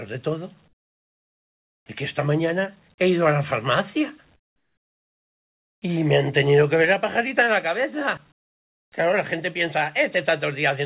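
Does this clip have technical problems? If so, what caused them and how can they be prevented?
Yes. At 0.68 to 1.86 s, 4.36 to 5.82 s and 8.32 to 8.92 s, the real background gives way to flat, featureless hiss about 25, 24 and 29 dB quieter. This is comfort noise in place of the background, likely caused by discontinuous transmission: the sender stopped sending audio during these quiet stretches and the receiver filled them with synthetic noise. Turning off discontinuous transmission (DTX) on the sending side would keep the real background in these pauses.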